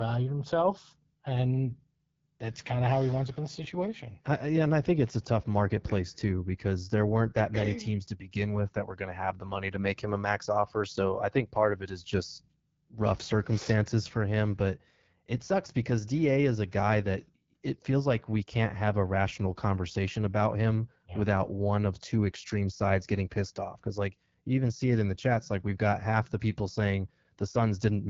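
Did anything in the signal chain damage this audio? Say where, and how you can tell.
Yes. Throughout, the speech sounds rough and raspy with a hissy top, the AMR wideband (HD Voice) codec at a low rate, which fits 8.85 kbit/s, coarsely modelling the voice.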